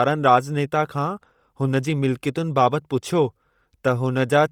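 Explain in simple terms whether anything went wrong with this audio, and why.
The speech has a breathy, grainy edge from start to finish, and the upper part of the sound is fuzzy and hissy. The likely cause is Bluetooth LC3 compression, squeezed hard. It cuts the sound into tiny 10 ms slices, throws away high detail, and patches it with noise.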